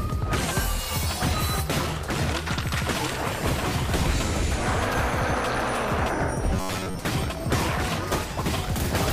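From 6.54 to 6.99 s there is robotic sound from repeated short buffers. The audio becomes a rigid, metallic buzz at 93.8 Hz. Most of that stretch is repeated material. Likely, input arrived too slowly, so a 10.7 ms slice kept looping.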